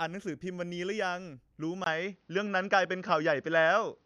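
At 1.84 s the input likely switched to a poorer device. After a 20 ms gap, speech loses everything above 6.5 kHz, turning dull, shifting in level, with faint new noise.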